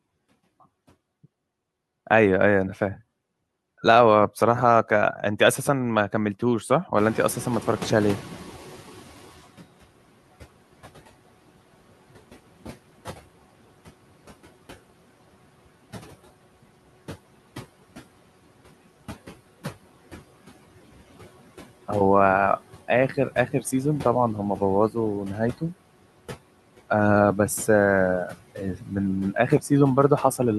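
Noise suppressor artifacts run through the whole speech clip. The suppressor pulls the background down by about 17 dB frame by frame, so the noise sinks between the words and rises under them. On a spectrogram, the noise floor looks patchy and flickering between words rather than smooth.

At about 7.0 s, the room noise jumps by about 23 dB and then settles about 17 dB below the speech. From 6.98 to 9.47 s, the noise suppressor is catching up: its noise estimate lags, so the new noise passes through with less reduction at first. Over roughly 2.5 s it sinks as about 15 dB of reduction takes hold. The waveform shows a raised floor tapering down.

Near the end, speech is cut by the noise suppressor. It mistakes parts of the voice for noise and ducks them by up to about 11 dB. This happens for roughly 150 ms between 28.76 and 28.91 s, and for roughly 100 ms within 29.34 to 29.71 s. Those sounds come out swallowed and faint, showing as brief dips in the waveform envelope and faded energy on the spectrogram.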